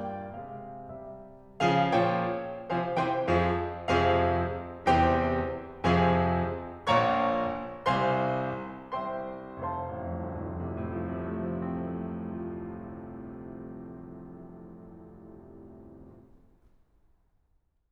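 No faults detected anywhere in this music clip.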